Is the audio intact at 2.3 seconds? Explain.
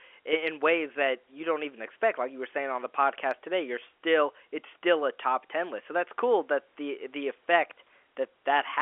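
Yes, the audio is intact at 2.3 seconds: no fault occurs there, and the faint room noise and the narrow telephone band of the G.711 line coding heard at that moment are normal parts of the recording and channel.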